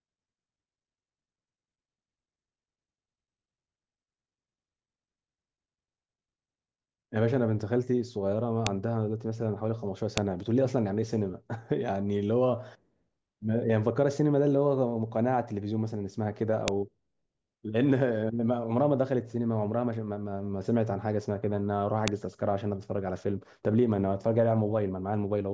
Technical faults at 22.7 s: none

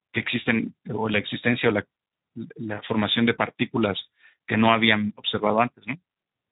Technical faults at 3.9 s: Speex codec

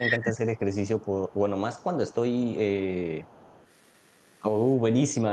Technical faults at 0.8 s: echo leak

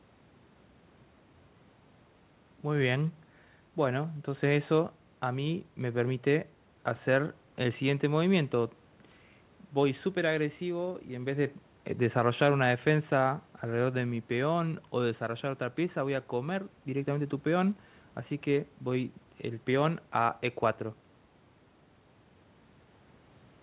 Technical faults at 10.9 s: none

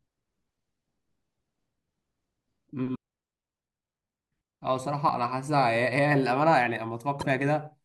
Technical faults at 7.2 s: damaged data in a compressed stream

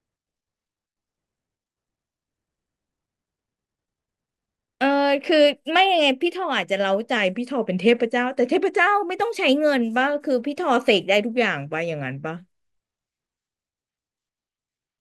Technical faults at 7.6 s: drift correction step

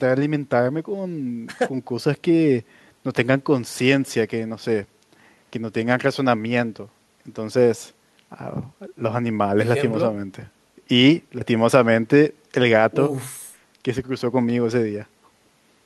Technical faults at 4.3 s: none

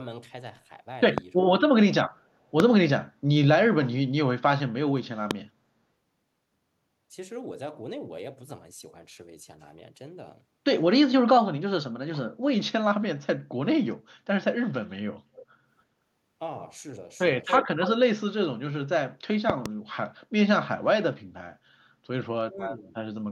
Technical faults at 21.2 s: none

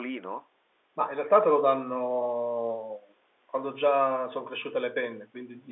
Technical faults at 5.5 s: none

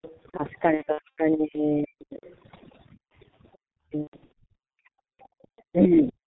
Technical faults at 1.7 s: overdone noise removal; G.723.1 codec; speech suppressed in double talk

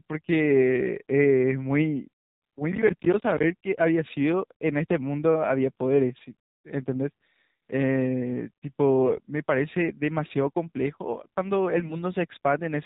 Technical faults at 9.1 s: AMR narrowband mobile codec; AMR bit errors

